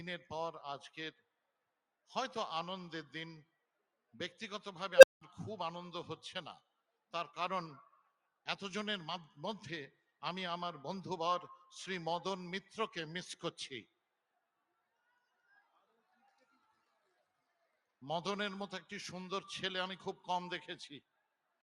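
A speech-tuned noise suppressor applied to music or sounds pumps the level by roughly 15 dB throughout, so the waveform envelope breathes and sustained spectrogram energy thins. Sound cut by the noise suppressor sinks up to about 18 dB at 1.12–2.09, 3.45–4.14, 6.59–7.13, 7.88–8.47, 9.91–10.22 (about 16 dB), 13.85–18.02 and 21.0–21.62 s. At 4.96–5.21 s an unstable filter swells a tone near 500 Hz within 70 ms into clipping, then about 190 ms of flat-line silence. On a spectrogram it is a bright horizontal band followed by a blank gap.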